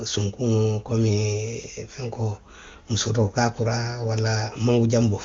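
No faults in the speech; it carries the band-limited character of wideband AMR coding at a rate high enough to leave little or no audible codec roughness, which fits operation near 23.85 kbit/s.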